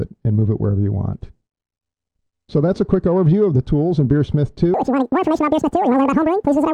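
At 4.74 s the audio is read two samples at a time, causing double speed through to the end at 6.73 s. Adjacent samples are treated as one frame, so the material plays twice as fast and a full 12 semitones higher. On a spectrogram every component jumps up an octave at 4.74 s; the waveform compresses horizontally, events arriving at half their spacing.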